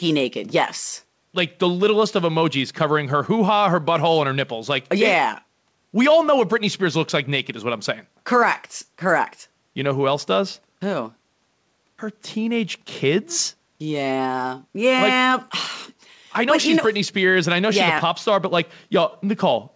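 Nothing is technically wrong with this speech recording: it has simply come through a call, where the G.722 codec at 64 kbps leaves nothing above 8 kHz, which is just how that call path normally sounds.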